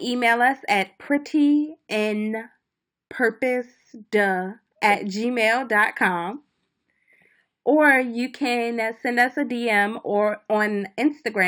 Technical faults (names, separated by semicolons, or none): imaging from linear upsampling